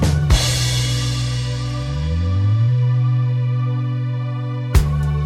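No technical faults are audible.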